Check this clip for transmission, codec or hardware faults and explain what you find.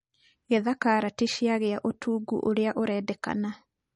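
One codec fault is present throughout the speech: MP3 compression. Nothing above 10.5 kHz survives, and the sound turns audibly watery and swirly, with smeared attacks, likely from a bit-starved MP3 encoder, consistent with about 40 kbps.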